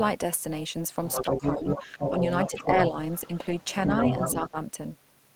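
Throughout the speech, the frames were likely reassembled with an overlap that does not add back to a steady gain, giving overlap-add ripple. The level swings by about 6 dB around 300 times a second, once per frame, so every stretch of the talker carries a metallic buzz. It is too fast to hear as separate pulses. Instead it blurs into a buzz with extra tones around each note, laid over the whole recording.

From 1.09 to 2.88 s, the far end's audio was likely played on the talker's loudspeaker and not fully cancelled, so the other side's voice leaks through at roughly the same level as the talker. A second voice runs alongside the first and competes with it directly. It returns from 3.11 to 4.5 s, somewhat quieter, as a lower but still distinct second voice beneath the talker.

Overlapping those leaks, speech is suppressed in double talk. The echo canceller likely could not tell the talker apart from the echo while both were active, so it pulled the level down on both. 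Between 1.24 and 1.92 s the talker's voice drops in pieces, by as much as about 10 dB, for a few hundred milliseconds in all. A briefer, shallower dip follows at 2.09 to 2.22 s. Another cut of about 10 dB lands between 4.33 and 4.57 s. Each one sounds like the talker being choked off for a moment and then released.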